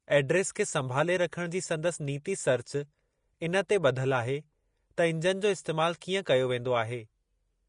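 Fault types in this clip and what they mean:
Vorbis compression: The speech sounds hissy and grainy throughout, with nothing above 10.5 kHz and a coarse, noisy treble where fine detail should be. This is likely Vorbis coding at a low rate, and the grain fits something near 35 kbps. A plain low-pass filter would leave the band below its cut-off clean. Here that band is roughened, because the codec has traded detailed high-frequency content for noise of similar energy.
Pre-echo: Four brief hisses, each about 10 ms long, sit just ahead of sharp onsets. They come at 0.55 s before "खे संभाले रखण जी", at 2.24 s after "संभाले रखण जी संदसि", at 3.68 s, and at 6.01 s before "कीअं कयो". Noise meant for each loud attack spreads across its coding block into the quiet moment before it. A click would be a sharp tick, but this is a soft smear, and it comes before the attack rather than trailing it like reverb.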